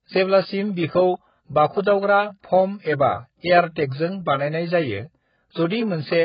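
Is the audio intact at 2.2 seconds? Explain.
No. At 2.2 seconds, as throughout the clip, the speech carries heavy damage consistent with AAC compression, likely AAC-LC at a very low bitrate, around 12 kbps. The encoder has too few bits for its 1,024-line frames, so it discards everything above about 5.1 kHz and coarsely quantises what remains. The result is dull, band-limited speech with smeared consonants and a warbling, fizzy texture on sibilants and sustained sounds.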